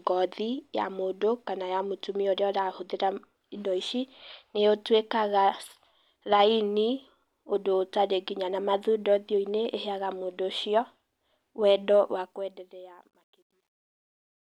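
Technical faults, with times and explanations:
12.01–14.55 s, truncation distortion on a fade: as the speech fades out, the level is reduced without dither and kept at too coarse a resolution, which points to roughly 11-bit output. As the signal sinks toward the smallest step, the waveform collapses into a few square levels. From about 13.0 s to the end, the tail turns gritty instead of thinning out as smoothly as the fade's level contour suggests.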